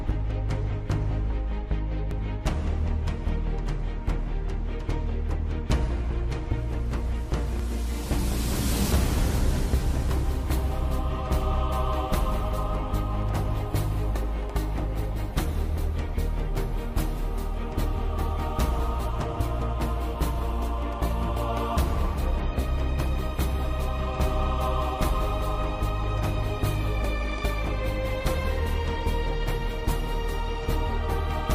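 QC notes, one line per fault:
2.11 s: dropped buffer (overrun), an abrupt forward jump in the sound, roughly 70 ms missing; likely samples overwritten before the program read them.
7.60 s: dropped buffer (overrun), the sound skips ahead about 20 ms, likely audio lost to a late read.
10.09 s: dropped buffer (overrun), a jump of around 40 ms with no silence between the joined sides, likely an overwritten capture buffer.
16.56 s: dropped buffer (overrun), the sound skips roughly 20 ms, likely audio overwritten before collection.
21.29 s: dropped buffer (overrun), a jump in continuity of about 70 ms, likely audio overwritten before being read.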